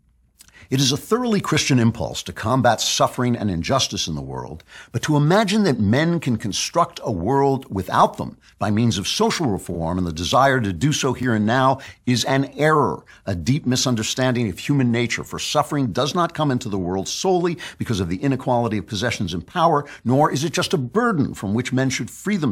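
At 2.82 to 2.86 s a single 42.7 ms block of repeated frames plays twice, adding 42.7 ms and giving a brief stutter. The compressed frame was sent or written twice, so the decoder simply played it again. On a waveform the same short shape appears twice back to back, and a spectrogram shows a thin vertical line at the seam. The same fault returns at 9.73 to 9.77 s.

Between those two, at 3.16 s, just after "impulse to combat" and before "and injustice in the", comes the first of the overlapping chunks. Each 4.0 s chunk starts 12 ms before the previous one ended, so that sliver plays twice and causes a click or hiccup. This repeats every 4 s, at 3.16, 7.18, 11.23, 15.24 (after "misunderstanding of human nature") and 19.26 s (after "of the inequality of"). Each join appears as a vertical stripe on a spectrogram and a small step or doubled wiggle in the waveform.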